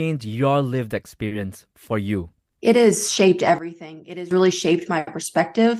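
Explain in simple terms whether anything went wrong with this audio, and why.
Two things go wrong. At 1.27 to 1.33 s there is a short concealed packet loss: about 40 ms of audio never arrived, so the receiver stretched the preceding sound to cover the gap. It comes across as a brief smear rather than silence or a click, which sets it apart from a plain dropout.

From 3.58 to 4.31 s there is a sudden gain jump: the speech and the background hiss together drop sharply in loudness in an instant, with no fade, then return at 4.31 s. The likely cause is a volume setting applied without smoothing. Because everything shifts at once, it differs from a speaker simply talking more quietly.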